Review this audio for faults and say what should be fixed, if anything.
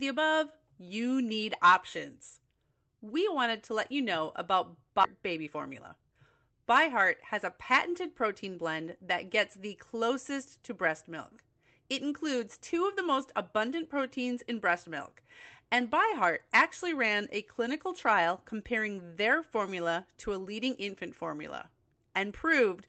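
Skip ahead at 5.03 s: right after "let you know about", playback jumps forward with no filler, so roughly 0.4 s of speech is missing and the two sides are butted together. A burst of late packets likely overfilled the jitter buffer, and it discarded a stretch of queued audio to cut its delay by about the same amount instead of playing it out. The splice lands abruptly because nothing was inserted to bridge it. To prevent this, size the jitter buffer so a late burst fits without a hard discard.

Jitter buffer speed-up from 5.13 to 6.53 s: the speech runs at about 111% speed while its pitch stays the same, so this passage sounds hurried. The buffer still held more audio than its target, so the receiver removed short slices one or a few pitch periods long, over and over, trimming roughly 150 ms in total. Through the Opus call path, with its coding noise and roughly 8 kHz top end, these cuts show up as tempo rather than as gaps. 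To prevent this, limit how quickly the buffer drains its excess so the time compression is spread out and harder to hear.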